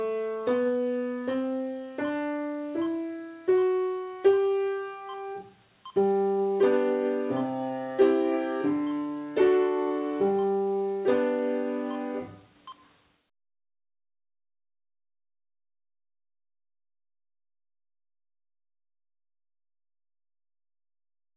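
No technical faults are audible.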